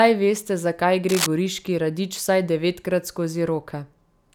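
Cable scratch noise runs from 1.09 to 1.28 s, between "veste zakaj" and "goriški radič vsaj devetkrat". The likely cause is a worn cable or connector shifting, its contact resistance jumping rapidly and adding dense, ragged bursts of scratchy rustle only a little quieter than the speech.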